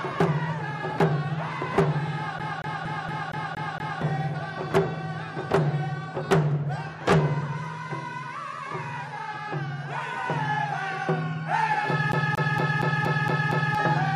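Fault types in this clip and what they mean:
CD stuck on one turn: a fast, even stutter in which the same 0.23 s fragment of sound plays seven times, with a brief mute at each jump, from 2.39 to 4.02 s and again from 12.12 to 13.75 s. A scratch makes the laser jump back one track at the same point on every revolution, so one turn's worth of audio repeats until the player breaks free.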